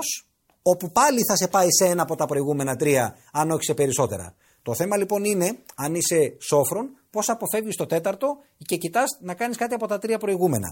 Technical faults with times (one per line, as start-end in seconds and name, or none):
none